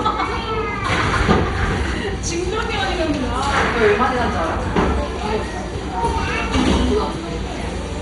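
From start to finish the sound is dull, with nothing above 11.2 kHz, and carries a heavy gurgling, granular distortion as upper bands flicker in and out. This is likely MP2 compression, starved of bits so that whole sub-bands are switched off, which fits a rate near 56 kbps.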